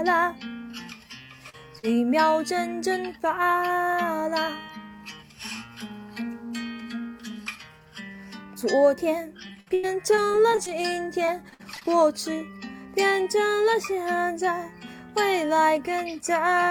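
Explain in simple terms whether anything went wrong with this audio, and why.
Yes, two kinds of network trouble can be heard. The first is short concealed packet loss, at 1.49 to 1.55 seconds and again at 1.79 to 1.85 seconds. Each time, about 40 milliseconds of audio arrived too late or not at all. The receiver covered the hole by stretching the last bit of sound, which leaves a quick smear or wobble. These are single, isolated slips, so the sound recovers at once.

The second is repeated packet loss, which gives a robotic sound. It runs from 9.47 to 10.73 seconds and from 11.25 to 11.89 seconds. Here the holes come one after another, and the longest lasts about 90 milliseconds. Roughly a quarter of each stretch is patched. The patches pile up, so the audio turns choppy instead of giving one brief blip.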